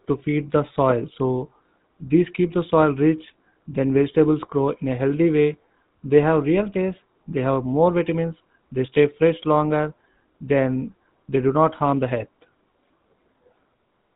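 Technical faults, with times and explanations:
throughout GSM full-rate codec: the speech was coded by the original GSM coder, which rebuilds the vocal tract from a coarse pulse excitation keeping one sample in three. Nothing above 4 kHz survives, and a plainly audible buzzy, gravelly roughness results, fitting a 13 kbps stream.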